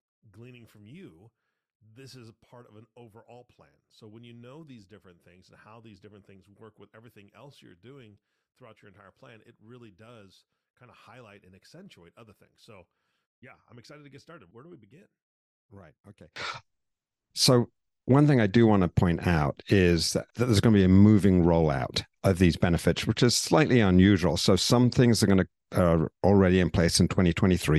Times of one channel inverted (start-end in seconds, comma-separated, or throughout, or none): 0.00-16.36